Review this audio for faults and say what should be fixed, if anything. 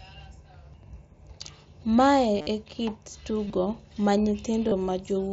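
Concealed Bluetooth headset packet loss occurs at 2.37 to 2.47 s, 3.48 to 3.50 s and 4.69 to 4.72 s. The first is worst. About 75 ms is lost across roughly 90 ms, and the longest run of 52.5 ms becomes a held buzzy tone because the receiver keeps repeating a matched slice of recent waveform. Unlike a plain dropout, there is no silence, just a steady buzz ending in a slight warble. The two later events each lose 22.5 ms. Keep the headset close to the phone and away from Wi-Fi interference.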